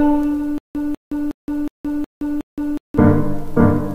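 From 0.58 s to 2.98 s the audio falls into a stutter with silent gaps: a single fragment of about 196 ms repeats six times, each repeat followed by roughly 169 ms of silence, so the burst returns at an even pace of one every 366 ms or so. The likely cause is a stalled player or stream that replayed its last buffered fragment on each retry and then ran dry, and whatever sound belonged in that stretch is missing.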